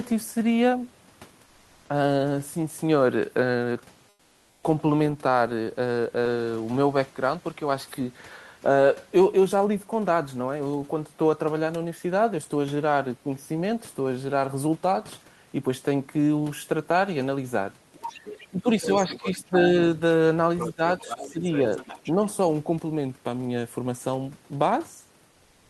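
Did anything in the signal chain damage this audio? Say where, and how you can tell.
Yes. Comfort noise in place of the background appears at 1.45–1.89 s, 4.09–4.63 s and 25.31–25.70 s. The live room noise gives way to a steady, featureless hiss about 3 to 4 dB quieter. This is likely codec discontinuous transmission (Opus DTX) filling pauses. On a spectrogram, those gaps show a smooth, uniform noise floor with no texture.

The other side's voice leaks through at 17.93–18.45 s, 18.81–19.34 s and 20.58–22.12 s, roughly 10 to 15 dB below the talker. This is likely a call-processing fault: the echo canceller left loudspeaker pickup in the microphone signal. A spectrogram shows a faint second set of harmonics.

Speech is suppressed in double talk at 18.49–19.55 s and 20.72–21.43 s, overlapping the leakage. The talker dips by around 15 dB for about 0.5 s and 0.4 s respectively, likely as the echo canceller turns everything down. 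The waveform envelope pinches.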